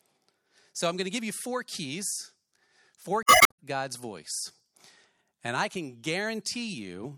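From 3.20 to 3.53 s, damaged data in the compressed stream corrupts the speech: the decoder misreads the broken frames and loses sync until it finds a valid header, producing a short glitch that appears as an abrupt discontinuity in the waveform.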